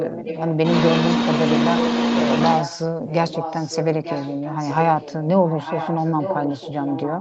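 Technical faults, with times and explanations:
0.00–0.57 s, 3.06–3.86 s, 4.03–5.24 s and 5.46 s to the end, echo leak: a second copy of the speech trails the original by about 0.9 s. It is loudest at the start, roughly 5 dB under the direct speech, then about 10 dB under. The likely cause is a far-end loudspeaker whose echo canceller let its microphone pickup return. A fixed, discrete lag separates this from room reverberation, which smears continuously.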